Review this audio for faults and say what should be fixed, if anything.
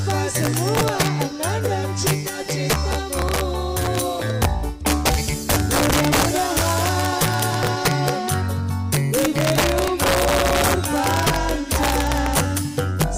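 Integer overflow runs throughout: the signal is pushed about 4 dB past the integer ceiling, and instead of being limited, each peak wraps to the opposite sign. Around one percent of samples jump across the full range, giving violent cracks on loud moments, harsher than clipping. Use saturating arithmetic or a limiter before conversion to integer.

Digital radio blending to analogue occurs from 2.12 s to 4.03 s: the receiver lost the digital stream and cross-faded over 359 ms to the FM broadcast, then back. During that stretch, hiss rises to roughly 35 dB below the signal and the level drops by about 2 dB. Improve digital reception, or align the analogue feed and match its level and treble before blending.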